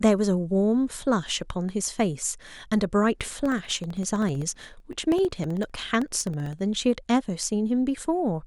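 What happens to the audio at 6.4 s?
Periodic USB or driver dropouts run from 3.20 to 6.59 s: a blocked bus or driver silences about a millisecond every 64 ms, giving strictly regular ticks rather than scattered clicks.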